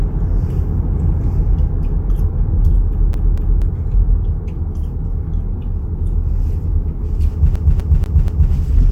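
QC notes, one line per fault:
3.13–3.62 s: CD stuck on one turn. A 0.24 s slice of sound plays twice in a row, each return marked by a brief mute where the laser jumps back a track at the same scratched spot on every rotation.
7.56–8.52 s: CD stuck on one turn. The same 0.24 s loop repeats four times, giving the fast, evenly spaced stutter of a skipping disc.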